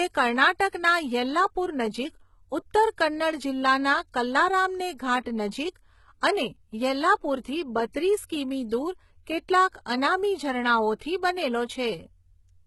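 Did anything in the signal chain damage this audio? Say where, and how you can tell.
Yes. The damage sits at the codec stage. Throughout the speech the treble sounds synthetic: s sounds come out gritty and lispy, and nothing at all reaches above about 11.8 kHz. That combination points to HE-AAC compression, likely at a very low rate around 16 kbps. The codec sends only the lower band and then regenerates the top by copying lower harmonics upward under a coarse envelope. The result is bright, but the overtones are misaligned.

The same codec also produces pre-echo at 10.99 to 11.01 s. A short hiss smears into the quiet gap about 24 ms ahead of a sharp onset, and that attack lands softened. The transform block holding the onset spread its quantisation noise evenly across its whole length. Noise scaled for the loud attack therefore leaked backward into the silence before it, where nothing masks it.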